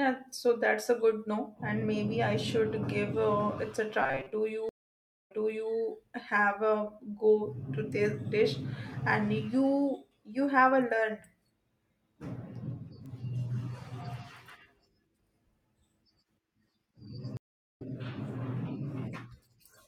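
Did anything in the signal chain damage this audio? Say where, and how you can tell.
Yes. At the driver or buffer stage, audio likely arrived too seldom, so short stretches were looped from 4.02 to 4.32 s. This gives a metallic 133 Hz buzz, which fits a buffer of about 7.5 ms, and most of the sound there is repeats.

A network stream reconnect happened twice. After a 559 ms silence at 4.69 s, the sound resumes 470 ms earlier. After a 380 ms silence at 17.37 s, it resumes roughly 300 ms later.

A bit error spike from a single corrupted sample causes one sharp, broadband tick at 13.06 s, unrelated to the surrounding sound.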